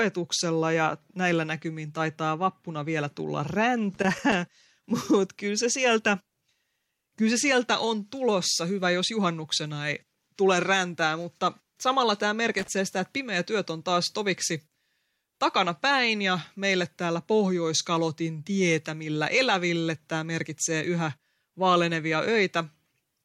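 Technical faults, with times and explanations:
3.94–4.34 s and 12.59–12.68 s, loose connector crackle: irregular scratchy bursts after "taitaa vappuna vielä tulla" and "räntää mutta samalla tämä". A worn contact makes and breaks, chopping the signal into random pops. Unlike clipping, it doesn't follow loudness.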